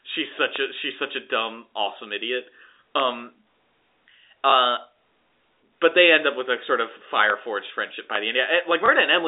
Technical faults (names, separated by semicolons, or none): loud pop; packet loss with last packet repeated